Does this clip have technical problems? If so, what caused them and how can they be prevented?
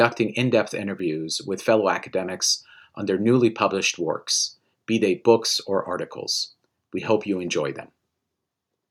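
No, there are no technical faults.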